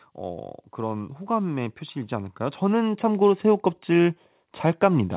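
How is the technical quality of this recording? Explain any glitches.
The recording has one clear fault, a gradual level rise in the middle, heard over audio band-limited to 4 kHz, which is consistent with a narrowband telephone codec such as G.711.

From 0.72 s to 4.22 s, automatic gain rising is audible. The gain control judged the input too quiet and stepped its gain up slowly by about 7 dB. The speech and the background noise swell together over those three and a half seconds.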